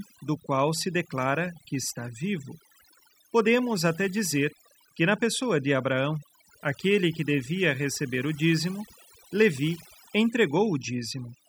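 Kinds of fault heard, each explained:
overdone noise removal: a noise reducer set far too strong runs through the whole speech clip, pulling bands near its noise estimate down or off. Gaps fall to near silence with twinkling specks. A spectrogram shows scattered isolated dots between holed, patchy harmonics.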